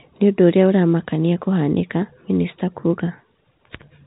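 No technical faults are present in the speech, which carries the narrow band of G.711 telephone coding, with nothing above about 3.8 kHz.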